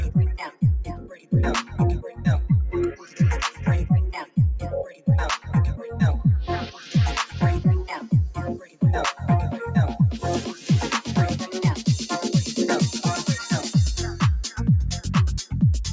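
From the start the level breathes and pumps, with held sound and tails sinking while sharp onsets come through; the swing is about 10 dB. This is a noise suppressor applied to music or sounds, a speech-tuned gate that mistakes sustained tone and ambience for noise and pulls it down. The call microphone processing leaves nothing above 8 kHz.

The worst dips are sound cut by the noise suppressor. From 0.44 to 2.26 s, roughly a second of sound drops by up to about 17 dB. Further cuts follow at 2.91 to 3.66 s (about 13 dB), 4.2 to 4.38 s (about 16 dB), 4.84 to 5.51 s (about 15 dB), 5.83 to 5.98 s (about 5 dB), 6.65 to 6.95 s (about 10 dB), 8.55 to 8.82 s (about 17 dB), and 10.5 to 10.7 s (about 8 dB). Each time, steady or decaying material is judged to be noise and squeezed, leaving the sound briefly thinned.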